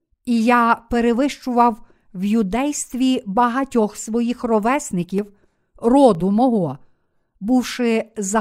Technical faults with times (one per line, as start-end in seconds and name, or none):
5.18 dropped buffer (overrun)
6.15 dropped buffer (overrun)